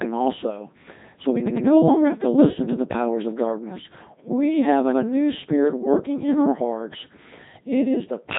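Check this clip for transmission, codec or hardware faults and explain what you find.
One codec fault runs through the whole clip. Codec 2 vocoder damage is present throughout. Only pitch, voicing, energy and spectral envelope survive, resynthesised as sine waves. The speech sounds heavily robotic and buzzy, with nothing above 3.8 kHz, which fits a mode around 2.4 kbit/s.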